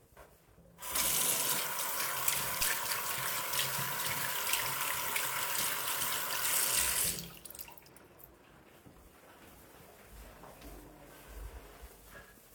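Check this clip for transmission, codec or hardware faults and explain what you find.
One hardware fault is present.

A phantom power thump occurs from 2.61 to 2.71 s. A supply switched on or off on a live input sends a voltage step through the coupling capacitors, heard as a deep low thump peaking at about -32 dBFS and dying away within roughly 22 ms.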